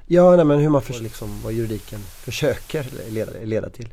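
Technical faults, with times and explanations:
0.86–3.44 s, digital radio blending to analogue: after "nej men hur man", a 235 ms crossfade to FM brings hiss about 25 dB below the signal and a level drop of about 2 dB.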